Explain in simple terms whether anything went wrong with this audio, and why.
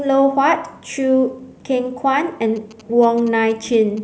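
From 2.56 to 3.99 s, GSM signalling bursts intrude: a nearby phone's radio pulses leak in as a galloping dit-dit-dit of short 217 Hz buzzes, clustered rather than steady like hum.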